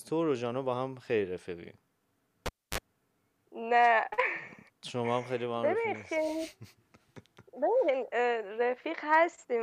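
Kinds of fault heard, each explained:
Cable pulled and plugged in: a live connector is withdrawn and reinserted while the signal is running. At 2.46 s a pop marks the break, then the speech drops to near silence for about 271 ms. On reinsertion the tip makes contact before the sleeve grounds, letting in a 50 Hz mains buzz lasting about 39 ms, and a second pop at 2.78 s brings the speech back.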